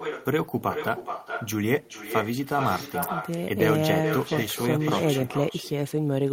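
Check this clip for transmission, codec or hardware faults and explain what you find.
One transmission fault is present, running through the entire recording.

Echo with no canceller, throughout: the far end is playing the call over a loudspeaker, its microphone captures that playback, and no echo cancellation strips it out before it is sent back. Every phrase of speech returns after a delay of roughly 400 ms, about 6 dB quieter than the original. The delayed copy sounds thinner, trailing each utterance like a quieter shadow.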